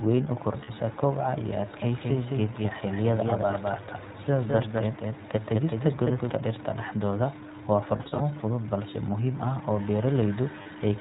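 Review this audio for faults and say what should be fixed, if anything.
The whole clip carries iLBC codec damage. Nothing passes above 4 kHz, and the speech has a rough, synthetic edge, which fits the 15.2 kbps mode with 20 ms frames. Unlike a plain lowpass filter, this also adds grainy coding texture. Prevention: use a wideband codec such as Opus where the link allows it.

Lost iLBC frames occur at 0.64–0.70 s (40 ms, just after "weyn u"), at 7.96–8.22 s (160 ms scattered across 240 ms, longest run around 40 ms, after "dhaxdooda waa") and at 10.62–10.67 s (40 ms). The decoder fills each gap with a repeated, buzzy pitch cycle, and speech snaps back immediately. Plain dropouts would be silent instead. Prevention: add a jitter buffer with FEC or redundancy.

From 1.82 to 6.30 s a doubled audio track runs, with a full-band copy about 5 dB quieter trailing by around a fifth of a second. The copy has no decay or room colour and starts and stops abruptly, which separates it from echo or reverb. 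It is likely caused by a second, slower capture path. Prevention: route the source only once.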